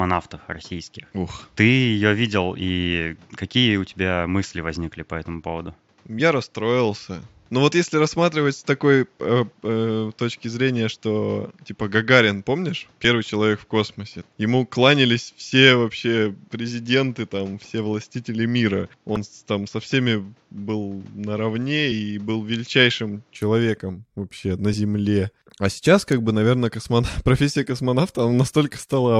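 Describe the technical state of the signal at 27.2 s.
At 27.2 s the speech signal is intact, with no audible dropout, distortion, noise burst or other technical fault at that moment.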